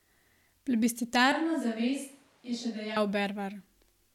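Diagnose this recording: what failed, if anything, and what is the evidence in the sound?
From 1.32 s to 2.96 s the speech suddenly goes roomy and hollow. The low end thins out, the level drops by around 5 dB, and the background room noise comes up, though it stays well under the speech. Then it snaps back just as abruptly. That's the signature of a switch to a distant microphone, most likely at the analogue wiring stage, where the close mic's feed dropped out and a farther mic covered that stretch.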